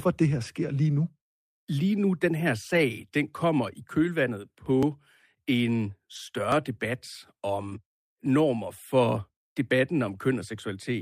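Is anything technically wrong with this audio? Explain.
Yes, there are three kinds of transmission and capture glitches in this speech clip.

Lost packet rebuilt from error correction happens five times: 0.99–1.01 s, 2.73–2.79 s, 6.15–6.17 s, 7.71–7.73 s and 10.07–10.13 s. The short ones last 20 ms, and the ones at 2.73 and 10.07 last about 40 ms, which points to two packets. Each missing packet was covered by the low-bitrate backup copy carried in the next packet, so nothing goes silent. Those stretches just turn briefly grainier and noisier.

The dropped buffer (overrun) faults sit at 4.83 s and 6.52 s. Each is a slight jump forward in the audio, like a splice with no gap. The first loses only a few milliseconds and the second around 10 ms. The likely cause is the capture program falling behind, so the hardware overwrote samples before they were read and the two sides got butted together.

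There's a short concealed packet loss at 7.69–7.73 s. About 20 ms never arrived in time, so the receiver extended the preceding sound and then faded back into the real signal. You hear it as a quick smear or wobble. It runs straight into one of the error-correction rebuilds at 7.71 s.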